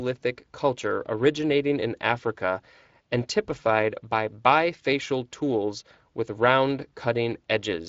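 Throughout the speech there is a hoarse, grainy roughness, the sound of Speex codec damage. A CELP coder this plainly strained is short of bits for the excitation, and the artefacts point to a bitrate near 20 kbps.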